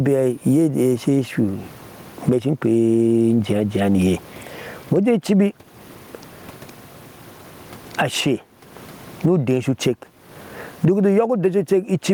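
From start to finish the speech shows gain pumping. The gain swings by roughly 25 dB, which leaves the delivery squashed and uneven in texture. The likely cause is input gain set far too high, with a fast limiter clamping down on each loud syllable. On a waveform, the speech peaks sit flattened at a near-constant ceiling. On a spectrogram, the room noise sits about 45 dB below the speech.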